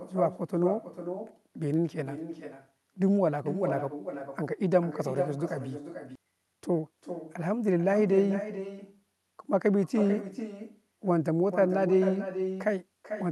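From start to finish there is echo with no canceller. A quieter, thinner copy of the speech trails every phrase by roughly 0.4 s, at about 9 dB below it. The far end's loudspeaker feeds its microphone, and nothing strips that out.

At 6.15 s the audio skips ahead. Around 0.4 s of speech is simply gone. The two sides butt together with no gap or fill. Later audio was already queued, so the dropped stretch cut the delay by the same amount.

From 6.25 to 7.07 s comes a jitter buffer speed-up. The speech runs at 112% speed but keeps its pitch, so it sounds hurried. Short pitch-period slices were cut repeatedly, removing about a tenth of a second, to shrink the buffer. The call codec's band edge near 12 kHz is present throughout.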